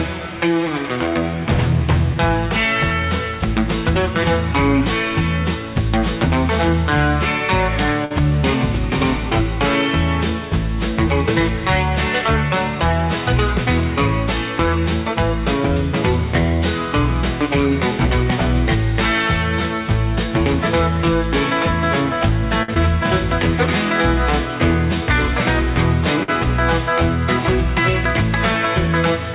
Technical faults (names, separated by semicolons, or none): short stall from a late packet; short concealed packet loss